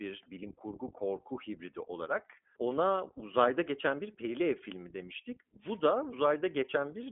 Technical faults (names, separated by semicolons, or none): iLBC codec; wireless microphone noise hit